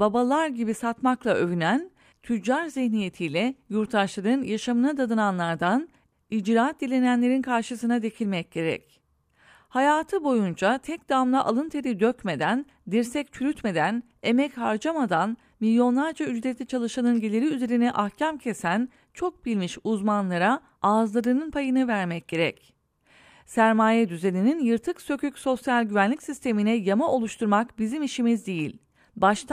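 No faults are audible anywhere in the speech.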